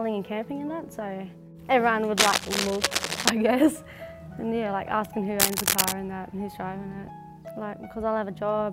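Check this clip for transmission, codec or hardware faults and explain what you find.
Two bursts of cable scratch noise stand out, and no other fault is audible. From 2.16 to 3.30 s, a dense, uneven scratching and rustling sits over the sound at roughly the same loudness as the sound itself. It returns from 5.40 to 5.94 s, this time somewhat louder than the sound. The likely cause is a worn cable, connector or control being moved, so its contact resistance fluctuates rapidly and injects ragged bursts of noise into the signal.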